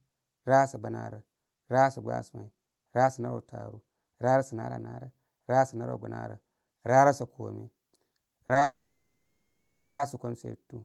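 Across the whole clip the speech sounds hollow and slightly phasey, with a fixed dip in the upper mids. That is channel delay with comb filtering: one channel lags the other by a small fraction of a millisecond, so summing them to mono cancels energy in evenly spaced notches, the first near 3 kHz.

At 8.47 s, 8.53 s and 8.59 s the speech briefly smears and wobbles, three quick stutters in a row. Each is a short concealed packet loss. About 20 ms of audio never arrived in time, and the receiver filled the gap by extending the preceding sound before blending back.

From 8.63 s the sound turns into a fading buzz, then goes silent for roughly a second and a quarter until speech resumes at 10.01 s, with that stretch simply missing. This is most likely a long network dropout: nothing arrived, concealment carried the last sound briefly, then gave way to silence.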